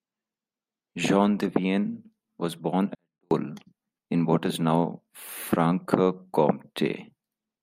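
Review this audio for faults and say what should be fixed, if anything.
Right after "was born", from 2.95 to 3.31 s, the speech stays clean but drops by about 48 dB to near silence: a 24-bit alignment error, where 24-bit samples held in the low bytes of a 32-bit word are read as full 32-bit values. Prevent it by shifting 24-bit data into the top bytes, or declaring its true width, before any 32-bit stage reads it.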